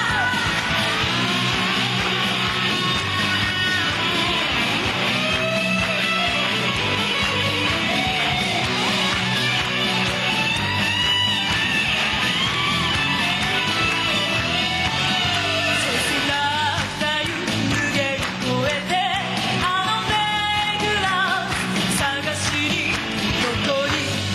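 Gain pumping runs through the whole clip: the level dips by about 5 dB under each loud sound and then recovers, likely from input gain set too high feeding a fast limiter. On a waveform the envelope looks squashed and flattened; a spectrogram shows brightness dipping and recovering in step.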